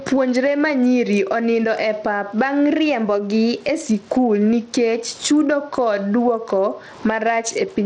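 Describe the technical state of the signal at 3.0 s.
At 3.0 s the speech sits inside a drift correction step running from 2.72 to 3.83 s, just before "skul nikech chudo kod". Speed and pitch rise together by about 5.6 %, roughly 95 cents or nearly a semitone, then snap back. This is likely a clock-matching stage changing playback rate in one jump to rebalance its buffer.

Gain pumping is also present here. The level is likely driven too hard into a fast limiter, so gain swings around 10 dB. Loud and soft parts sit closer in level, leaving the speech squashed.

Bluetooth SBC compression is plainly audible at this point. The treble flickers and drops out, with gritty noise and aliasing riding on the speech. The sound fits a low SBC bit allocation near 80 kbps, likely starving the upper sub-bands and quantising the rest coarsely.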